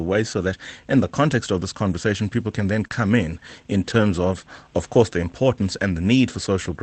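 Lost packets rebuilt from error correction mark this speech clip at 1.31–1.33 s, 2.83–2.85 s, 2.92–2.94 s and 3.86–4.00 s. In each case the following packet carried a low-bitrate copy that the decoder played in place of the missing audio, so there is no gap, only briefly rougher, noisier frames. A short concealed packet loss falls at 2.87–2.92 s, where about 20 ms never arrived in time. The receiver extended the preceding sound across roughly 26 ms before blending back, heard as a brief smear that can swallow a consonant. The call codec's coding noise sits throughout, with the top of the spectrum stopping at 8 kHz, which fits Opus at around 24 kbps.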